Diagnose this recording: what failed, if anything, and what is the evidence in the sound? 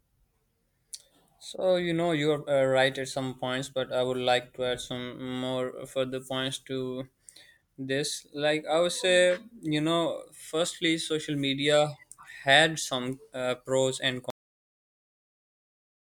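The recording has a cut-off end at storage: the speech stops abruptly at 14.30 s, mid-sound, and falls straight to digital silence with no decay for the last 1.7 s or so. That points to the final buffers never being written to the file.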